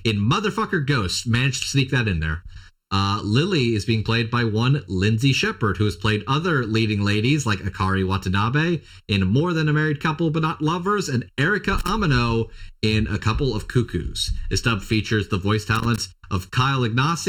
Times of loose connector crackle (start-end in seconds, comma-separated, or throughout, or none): 11.78-11.89, 15.75-15.98